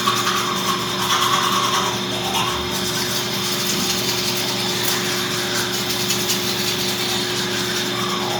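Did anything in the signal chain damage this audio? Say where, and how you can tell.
Yes. Bluetooth LC3 compression runs through the whole clip, and the damage is plainly audible. This is a codec-stage fault, likely from an LC3 encode over a Bluetooth LE Audio link. The transform coder quantises the upper spectrum coarsely and fills the gaps with noise, leaving a grainy, breathy texture on the sound. The smearing fits 10 ms frames at a moderate bitrate, around 48 kbps. Content still reaches about 20.2 kHz, so the band is not truncated.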